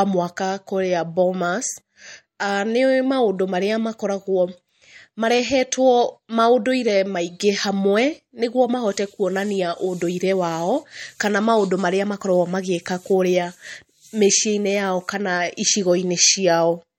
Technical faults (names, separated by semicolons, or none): MP3 compression